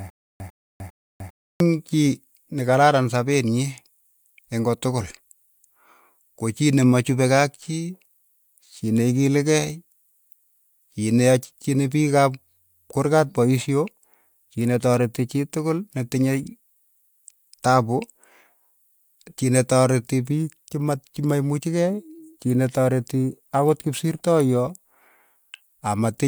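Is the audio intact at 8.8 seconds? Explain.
Yes, at 8.8 seconds the speech plays through cleanly with no dropout, click, distortion or other fault.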